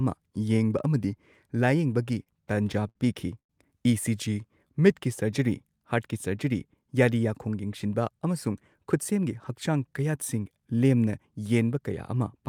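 From 2.05 to 2.97 s the speech stutters with repeated stalls. Packets kept arriving later than they were needed, so the jitter buffer drained nine times in under a second. Each time the receiver carried the last sound on until data resumed, filling about 158 ms, roughly a sixth of that stretch, with the longest gap 62 ms. Nothing is lost, but the speech drags and hiccups. A spectrogram shows short smeared, repeated slices breaking up the normal formant motion.

At 3.39 s the audio stops for about 0.12 s. A brief carried-over sound fades almost at once into near silence lasting about 100 ms, and then the speech picks up exactly where it broke off, so 102 ms of delay has been inserted without losing anything. This is most likely a call audio freeze, with packets held up in transit and the jitter buffer running dry. The waveform shows a flat, near-empty notch with a short tapering tail at its start.

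From 4.34 to 4.68 s a jitter buffer slow-down stretches the speech to about 90% speed while the pitch stays the same. To rebuild its reserve, the receiver repeated single pitch periods many times over, adding 45 ms in total. Vowels sound slightly drawn out. On a spectrogram the harmonics keep their spacing, but voiced segments run longer, with subtly regular, repetitive striations.

From 9.11 to 9.53 s a jitter buffer speed-up does the opposite. The buffer had built up more audio than its target, so the receiver trimmed short slices of one or a few pitch periods again and again, removing roughly 40 ms. The speech runs at about 108% speed at the same pitch and sounds slightly hurried. A spectrogram shows compressed voiced segments and faint discontinuities where cycles were cut out.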